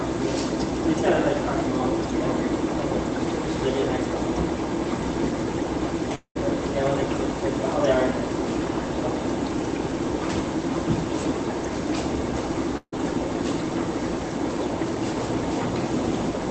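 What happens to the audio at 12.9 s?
At 12.77 to 12.94 s there is a burst of packet loss. The receiver's concealment extends the last sound for about 150 ms, fading it to a brief silence. The audio then resumes with roughly 160 ms of material missing.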